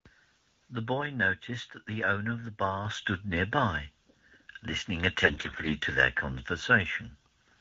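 Speech whose level jumps abruptly at 2.85 s, with the voice and the background noise both becoming louder at once, by about 6 dB, and staying there. This is a microphone volume stepped up: the calling software judged the input too quiet and raised the device's gain in a single step rather than ramping it. Because the change happens before any encoding, everything the microphone picks up rises together. From 5.23 to 5.76 s the voice turns hoarse, scratchy and gargly while keeping roughly its pitch and loudness. These are AMR bit errors, probably from a weak radio link. A heavy share of the less-protected bits, somewhere around one in seven, arrived flipped, but the checksum on the critical bits still passed, so the decoder played the corrupted frames instead of concealing them. Misplaced excitation pulses and wrong fine gain and spectral values produce the grit, and the span fits roughly two dozen 20 ms frames. 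Around these faults the band-limited HD Voice sound is consistent with the AMR wideband codec at its 12.65 kbit/s mode, with only light coding damage.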